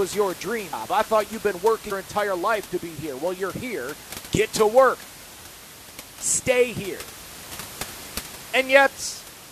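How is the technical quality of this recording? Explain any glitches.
The recording has two glitches, with room noise sitting about 17 dB below the speech. At 0.72 s, between "your dream" and "I thought you've been", and at 1.91 s, before "entire life to be", compressed frames are skipped. Roughly 150 ms of audio vanishes each time, consistent with about seven dropped 23 ms codec frames, so the speech jumps ahead. On a spectrogram this appears as a vertical seam where the harmonics break abruptly.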